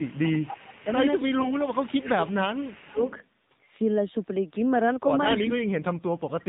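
A short speech recording carried over a mobile call, with the AMR narrowband mobile codec audible throughout at 7.4 kbps. A spectrogram shows a hard ceiling at 4 kHz with nothing above it, and the voice sounds buzzy and synthetic, as a low-rate vocal-tract model driven by sparse pulses would make it. From 0.00 to 0.96 s there is an echo leak, likely from a loudspeaker on the far end whose echo canceller let part of the signal through. A copy of the voice trails by 276 ms at about 15 dB below the speech, visible as a faint repeated pattern shifted right on the spectrogram. Speech suppressed in double talk appears three times: 0.00 to 0.18 s, 1.2 to 2.98 s, and 5.91 to 6.49 s. In each case the canceller likely ducked the talker while both sides spoke. The waveform envelope dips by about 25, 20 and 35 dB. AMR bit errors at 1.40 to 1.53 s make the voice hoarse and gargly while keeping its pitch and level. 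A handful of damaged 20 ms frames would explain this, with smeared, misplaced pulse energy on the spectrogram.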